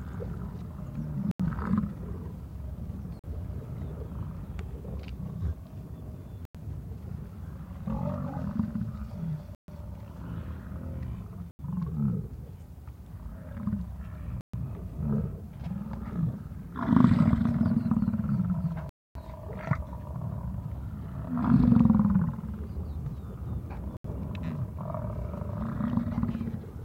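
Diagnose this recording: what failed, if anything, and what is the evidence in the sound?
Eight dropouts to silence at 1.31, 3.19, 6.45, 9.55, 11.51, 14.41, 18.89 and 23.97 s, lasting 43 to 260 ms, with the longest at 18.89 s. Each time the sound stops dead and then resumes. This is likely a Bluetooth stall at the wireless playback link. Radio interference delayed packets, the receiver's buffer emptied, and output went silent until the retransmitted audio arrived.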